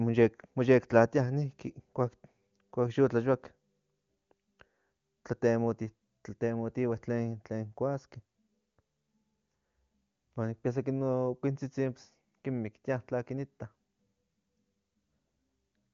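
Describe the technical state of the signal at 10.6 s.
At 10.6 s the speech is intact, with no fault at that moment, and the AMR wideband (HD Voice) coding at a high rate around 24 kbit/s leaves at most faint traces.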